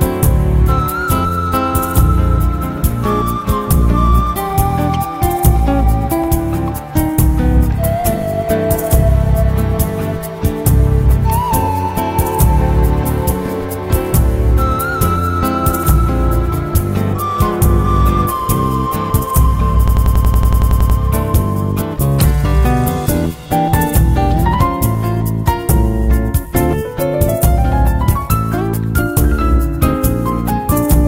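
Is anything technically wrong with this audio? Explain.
Yes, there's a system hang loop from 19.88 to 20.99 s. The machine stalled while the audio hardware kept replaying its buffer, so a roughly 93 ms slice, which fits a 4096-sample buffer, repeats 12 times at 10.8 Hz, giving a machine-gun stutter.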